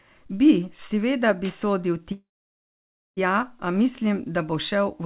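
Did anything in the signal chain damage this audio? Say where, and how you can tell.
Yes, there's a call audio freeze at the network and jitter-buffer stage. Right after "seveda bi sodil", at 2.12 s, the last sound carries on briefly, then drops to near-silence for about 0.93 s until 3.19 s, and the speech resumes cleanly with "a mislim da bo". Nothing seems skipped; a gap of about 1.05 s was inserted. That points to packets held up in transit, likely a network stall, draining the jitter buffer.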